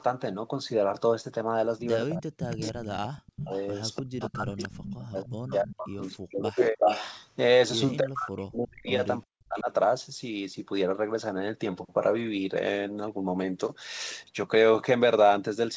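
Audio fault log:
2.08–3.51, 4.02–6.85, 7.99–8.9 and 9.24–9.7 s: speech suppressed in double talk. The voice drops by up to about 40 dB while the other side speaks, likely because an echo canceller could not separate talker from echo and turned both down.
2.4–4.69, 5.23–7.26, 8.38–8.43 and 8.86–8.92 s: echo leak. A delayed copy of the voice returns 300 ms late, then 363 ms late. It runs from about 10 dB below the speech to level with it, then only faint scraps. This is likely residue that a loudspeaker-side echo canceller failed to remove.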